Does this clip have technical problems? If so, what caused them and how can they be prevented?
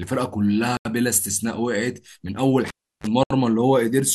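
Yes, this speech clip has two kinds of problem. The first is a Bluetooth stall, and it happens twice. Around 0.77 to 0.85 s the sound drops to silence for about 83 ms, and again from 3.23 to 3.30 s for about 72 ms, then carries on. That's likely the wireless link getting hit by interference, so packets arrived late, the headphones' buffer emptied and playback waited for the resends. To prevent it, keep the phone close with a clear line of sight and away from busy 2.4 GHz gear.

The other is a cable pulled and plugged in, running from 2.68 to 3.07 s. You get a pop as the plug comes out, then roughly 340 ms of near silence. Next comes a short burst of 50 Hz mains buzz, about 34 ms, while only the tip is making contact and the shield isn't grounded yet. A second pop follows as the connection seats properly and the sound comes back. To prevent it, mute or pause before touching the connector, and use a jack that locks or seats firmly.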